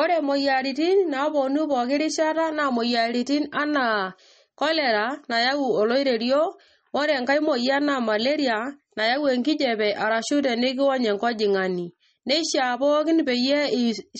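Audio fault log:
throughout, MP3 compression: nothing comes through above about 8.4 kHz, and the speech has a plainly watery, swirly edge with smeared attacks. That's likely an MP3 encoder starved of bits, which fits a bitrate around 32 kbps, chopping the treble and flickering weak bands on and off.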